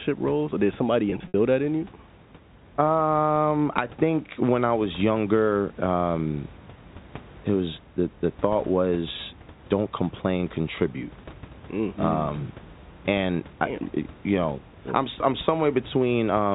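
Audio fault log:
1.10–1.34 s, packet loss with pitch repetition: the sound briefly turns held and buzzy in short bursts, with the longest one thinning out before the signal cross-fades back in, under room noise about 22 dB below the speech. About 100 ms of audio went missing, scattered across 240 ms, which fits several 20 ms packets. The receiver covered each gap by looping the last pitch period and fading it over roughly 50 ms. The longest gap, 60 ms, outlasted that fade.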